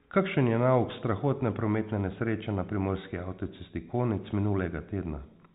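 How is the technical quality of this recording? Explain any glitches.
No glitches; the speech comes through a fixed-line telephone channel using G.711 A-law coding, so nothing above 4 kHz is present, and no fault can be heard.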